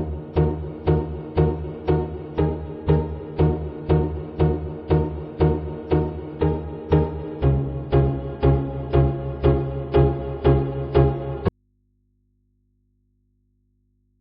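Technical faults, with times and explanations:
11.48 s to the end: audio dropout to a faint residue. The sound cuts abruptly to faint mains hum, likely a lost signal on a still-live input.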